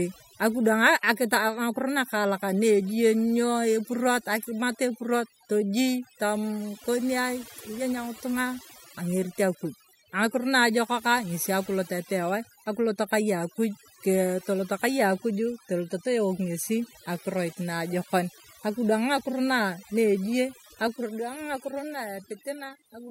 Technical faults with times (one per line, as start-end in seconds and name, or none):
0.00-23.11 overdone noise removal